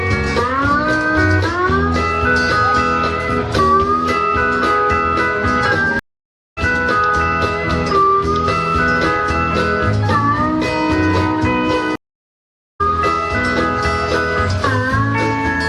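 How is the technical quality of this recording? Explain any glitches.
Two stream reconnect dropouts break the recording. The first runs from 5.99 to 6.59 s, with 575 ms of silence. The second runs from 11.96 to 12.81 s, with 842 ms of silence. Each time the connection dropped and the player went quiet. It then rejoined the stream with a fresh decoder. The audio comes back about half a second further on, so material is skipped. The first moment after each gap is muted or fades in.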